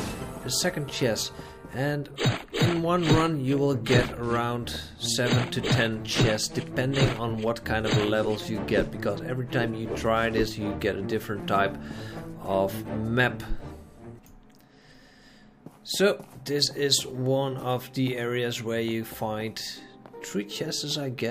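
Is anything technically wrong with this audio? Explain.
Yes. Periodic USB or driver dropouts from 1.03 s to 7.17 s. About seven tiny silent gaps arrive every 1.02 s. Each is a blocked driver losing a fraction of a millisecond. Each sounds like a regular tick.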